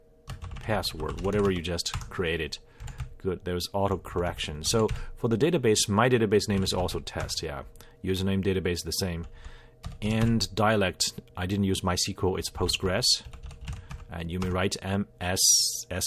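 Nothing stood out as a technical problem anywhere in the recording.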